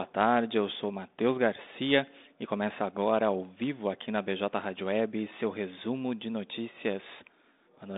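Nothing stood out as a fault on listening to this speech.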